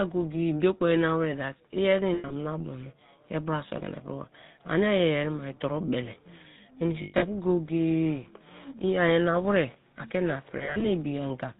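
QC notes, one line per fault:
throughout: GSM full-rate codec. Buzzy, gravelly roughness with nothing above 4 kHz, which fits a 13 kbps pulse-driven vocal-tract model.
2.14–2.33 s, 7.02–7.23 s, 10.58–10.85 s: lost GSM frames. Missing stretches are patched by repeating the last good frame at falling level, giving a rough metallic ring, longest around a tenth of a second.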